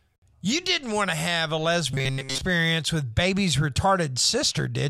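From 1.91 to 2.41 s, between "want to have a" and "with baby's", the voice turns into a rigid metallic buzz pinned near 133 Hz. This is robotic sound from repeated short buffers, likely a 7.5 ms slice looping through most of that stretch. It differs from a dropout because the sound never goes silent.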